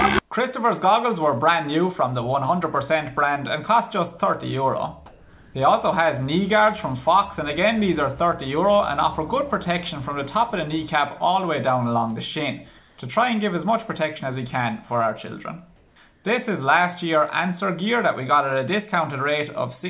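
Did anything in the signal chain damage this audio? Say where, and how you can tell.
Yes. Comfort noise in place of the background appears at 5.06–5.54, 12.78–12.98, 15.76–15.96 and 16.12–16.24 s. The real background turns flat and featureless there, and shifts by about 2 dB at 12.78 and 16.12 s. The likely cause is discontinuous transmission in call processing, with the receiver synthesising noise during pauses.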